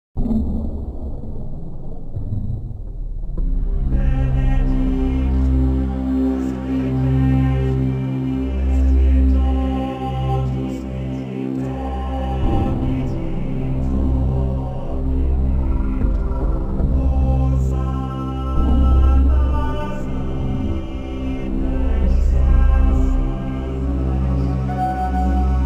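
No technical faults are audible anywhere in the audio.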